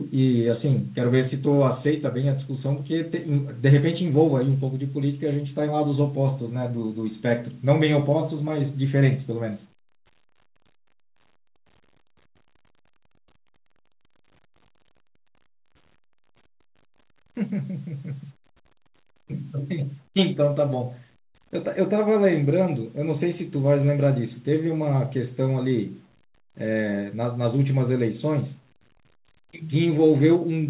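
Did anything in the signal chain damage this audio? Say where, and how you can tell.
No, nothing in the chain damaged this speech; the band stopping at 4 kHz is simply what a G.711 A-law call path at 64 kbps passes, exactly as that narrowband telephone codec is meant to behave.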